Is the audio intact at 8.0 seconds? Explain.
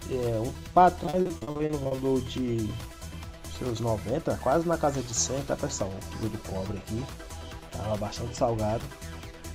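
Yes, the audio is intact at 8.0 seconds, with no audible fault at that moment.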